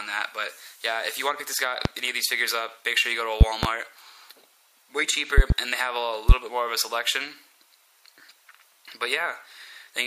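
A sudden voltage step, likely from a plug, switch, static discharge or driver glitch, enters the signal path four times, and the following circuitry shapes each step into a brief pulse. The result is a loud pop, peaking about 25 dB above the surrounding audio: a single pop at 1.85 to 1.89 s, a quick double pop from 3.41 to 3.67 s, another double from 5.38 to 5.54 s, and a single pop at 6.29 to 6.33 s, with the sound continuing underneath each.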